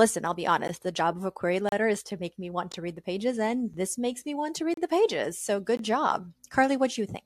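Gaps between stream segments occur at 0.68 s, 1.69–1.72 s, 2.72 s, 3.74 s, 4.74–4.77 s and 5.77–5.79 s, roughly once per second. They fall between "I'll be" and "the job of a", between "to make me want" and "to read the pages", and right after "makes me want to". Each join between 1-second segments was timed slightly late, so silence fills a hole of about 7 to 33 ms. The hard-edged dropouts chop the speech rhythmically, but no audio is missing.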